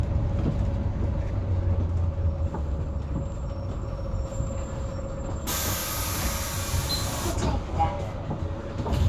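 Nothing in these sounds stands out as a technical fault; they just carry on as they were recorded, with nothing catching the ear along the way.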